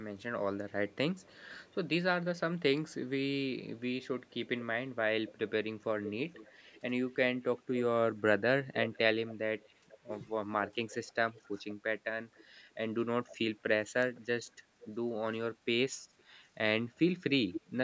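A far-end echo canceller likely let part of its loudspeaker pickup pass back down the line, and that echo leak runs through this speech from 0.19 to 17.61 s as a faint copy of the voice trailing by 489 ms, about 15 dB under the direct speech. A second, separate fault is speech suppressed in double talk, likely caused by the canceller mistaking simultaneous talk for echo and turning the talker down. The voice dips briefly at 5.3 s and 14.0 s, the latter sharply, and loses short pieces, a fifth of a second or less in each, within 9.92 to 12.04 s and 15.58 to 17.72 s, with drops of roughly 10 to 15 dB.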